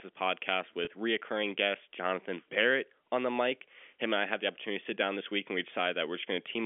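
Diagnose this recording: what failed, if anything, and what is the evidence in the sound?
The failure is in the network stage: packet loss with pitch repetition. At 0.85 s, just before "reoccurring guest", about 20 ms of audio is missing. The gap is short, so it sounds like a brief held, buzzy tone, not silence. The receiver bridged it by repeating the last pitch period until real audio returned at 0.87 s. That length fits two lost 10 ms packets. The G.711 telephone band, 250 Hz to 3.4 kHz, is audible throughout.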